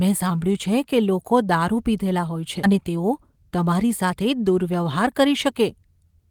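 At 2.63 s the speech does a skip ahead. Roughly 0.7 s of audio is simply gone, and playback jumps straight to later material with no silence and no concealment filling the seam. The two sides butt together almost directly, so the ear hears an abrupt splice rather than a pause. That is what separates it from a dropout, which leaves an audible hole, or from packet loss concealment, which smears a substitute sound across the gap.

From 2.72 s to 4.33 s comes a jitter buffer speed-up. With too much audio queued, the receiver trimmed short pitch-period-sized slices repeatedly to cut the delay, shortening that stretch by something like 150 ms. The speech runs at about 108 % speed and sounds slightly hurried, yet the pitch stays where it was. That unchanged pitch rules out a resampling or clock-rate error, which would raise pitch along with tempo.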